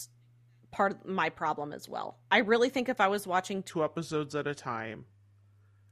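At 3.7 s the speech drops into a section at the wrong speed that runs to the end. It plays at 0.84 times its proper rate, about three semitones lower. Voices turn deep and slow. A wrong playback clock is the likely cause.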